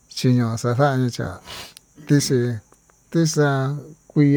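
Nothing stood out on listening to this speech recording.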